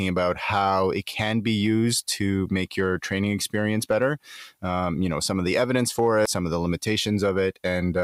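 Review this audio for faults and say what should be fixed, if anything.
A short glitch at 6.26 s, after "of the evidence for", comes from damaged data in the compressed stream. Corrupted bytes made the decoder misread a frame and lose sync. Re-fetch or re-encode the file from an intact source, and verify checksums on every transfer so corrupted bytes are caught before decoding.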